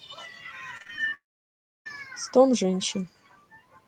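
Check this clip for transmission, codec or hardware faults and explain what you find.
Two transmission faults appear in this speech clip, back to back, while a faint room noise sits about 27 dB below the speech throughout.

From 0.77 to 1.14 s the speech turns choppy, with small pieces dropping out. This is repeated packet loss (robotic sound): five short gaps, the longest 32 ms, each patched by stretching the preceding sound, so about 29% of that span is synthetic fill.

From 1.14 to 1.87 s a brief smeared buzz fades into roughly 0.66 s of near-silence before speech resumes with the intervening audio simply gone. This is likely a long network dropout, where concealment ran out and nothing arrived to play.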